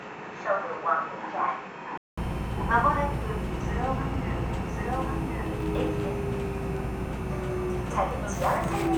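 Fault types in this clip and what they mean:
Input switched to a poorer device: the recording likely started on a lesser input before changing over at 2.18 s, so the first stretch is duller and a little quieter, with nothing above 7.6 kHz and its own faint noise floor, then a brief 200 ms silence at the switch.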